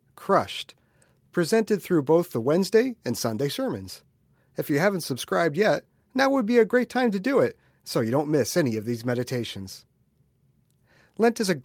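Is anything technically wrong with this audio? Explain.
No, nothing technically wrong can be heard here.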